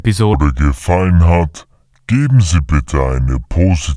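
From 0.34 s to the end, the speech has a wrong sample rate: it runs at about 0.69 times normal speed and drops about 6.5 semitones, sounding slow and deep. That fits 32 kHz material played at 22 kHz. On a spectrogram, harmonics sit lower and syllables stretch wider.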